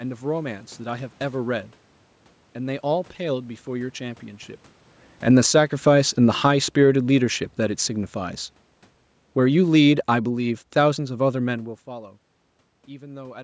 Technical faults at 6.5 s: automatic gain falling

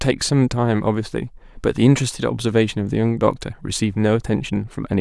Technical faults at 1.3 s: none

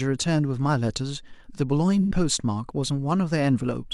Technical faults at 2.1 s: AAC frame loss with concealment

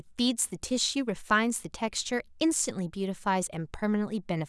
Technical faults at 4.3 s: none

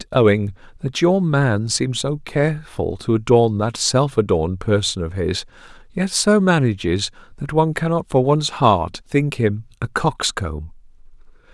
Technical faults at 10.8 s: none

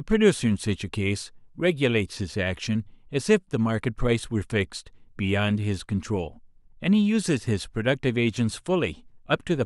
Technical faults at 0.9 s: none

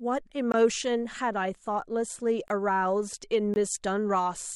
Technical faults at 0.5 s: block of digital silence

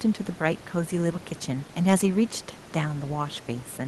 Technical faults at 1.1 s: none

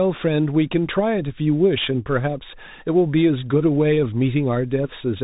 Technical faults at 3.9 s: Bluetooth CVSD headset codec

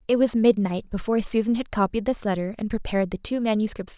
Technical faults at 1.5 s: none

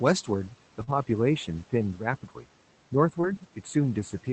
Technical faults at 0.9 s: channel delay (comb filtering); short concealed packet loss; lost packet rebuilt from error correction

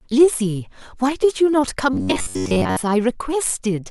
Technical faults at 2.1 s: robotic sound from repeated short buffers

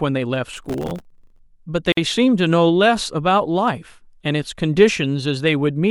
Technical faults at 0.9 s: processor overload crackle

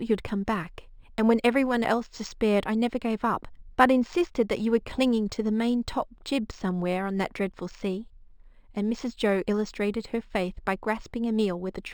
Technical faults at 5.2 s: imaging from linear upsampling

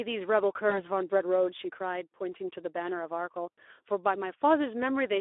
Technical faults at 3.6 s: Speex codec; VoIP packet loss concealed by the speech codec

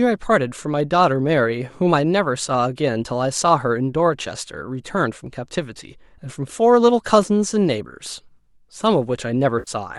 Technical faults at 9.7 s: AAC frame loss with concealment

